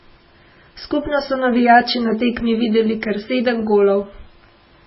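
Speech, with heavy MP3 compression throughout, likely from a bitrate near 16 kbps. Nothing is heard above 5.6 kHz, and faint detail sounds watery and swirly. A spectrogram shows a flat ceiling at 5.6 kHz with patchy, flickering blocks below it.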